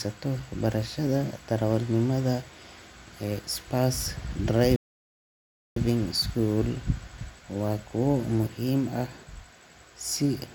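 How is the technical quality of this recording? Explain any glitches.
A single rebuffering stall affects this speech clip, from 4.76 to 5.76 s. The player exhausted its downloaded audio and paused until more data arrived. The speech drops to silence for about one second, then picks up exactly where it stopped, with nothing missing but time added.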